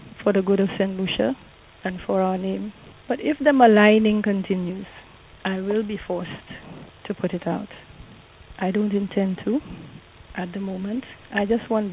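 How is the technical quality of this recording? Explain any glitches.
No technical faults can be heard anywhere in the recording. There are no glitches to explain.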